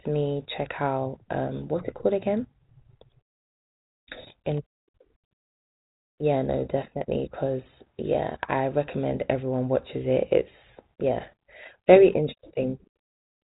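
No technical faults turn up in this speech clip, which carries the narrow telephone band of a G.726 ADPCM path with nothing above about 3.8 kHz and only a light codec grain, which fits the 32 kbit/s rate.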